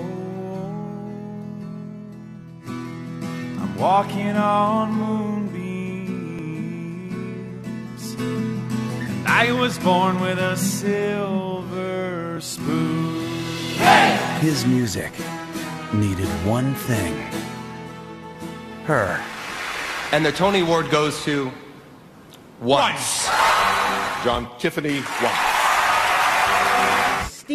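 Three tiny skips in the audio, at 6.39, 12.37 and 18.35 s, come from an overlap between stream segments. The spacing matches a 6 s segment length. Where two segments overlapped, about 12 to 15 ms of real sound was trimmed away. Each cut shows as a sudden step in the waveform and a thin broadband vertical line on a spectrogram.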